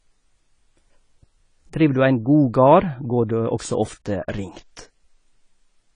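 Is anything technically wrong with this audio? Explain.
Yes, the speech carries plainly audible lossy-codec damage from start to finish, most likely AAC compression. Nothing is present above 10 kHz, so the sound is dull, and the coder's coarse quantisation of each frame's frequency lines leaves sibilants fizzy and sustained sounds warbling, which fits a low bitrate around 24 kbps. On a spectrogram the energy stops at a hard ceiling near 10 kHz, with patchy holes and blotchy noise-like fill in the upper bands below it.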